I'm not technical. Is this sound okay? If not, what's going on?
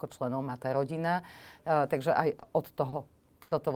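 No. There is a short stall from a late packet at 2.39 s, again at 2.89 s, and a longer one from 3.42 to 3.53 s. Each time, a chunk of the speech arrived late, so the player had nothing new to play. It held the last sound for about 30 milliseconds at the first two spots and about 90 at the third, then carried on where it left off. Nothing is lost, but the speech briefly drags, with a faint buzz or dip.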